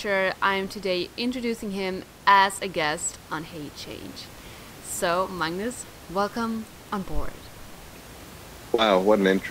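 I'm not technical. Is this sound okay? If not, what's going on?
Yes, nothing is wrong with how this speech was captured or played back, and the faint background noise is simply the room the microphone was in, sitting well beneath the talking.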